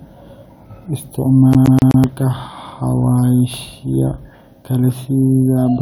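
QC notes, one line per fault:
1.53–2.04 s, CD stuck on one turn: the laser skips back each revolution, replaying a 126 ms slice of speech four times with brief mutes, a fast stutter.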